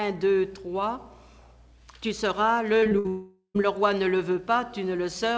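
Between 2.80 and 3.06 s the audio turns choppy and robotic: repeated packet loss leaves four short holes, the longest 57 ms, patched by repeating sound, so about 40% of that stretch is filled in. Right after, from 3.08 to 3.56 s, one continuous hole of about 0.46 s is most likely a long network dropout. Unlike the brief, recurring gaps before it, this is a single extended loss: the last sound is stretched into a fading buzz or hiss, then roughly 80 ms of silence before the audio resumes. Throughout, nothing is heard above 8 kHz, which fits a G.722 call codec.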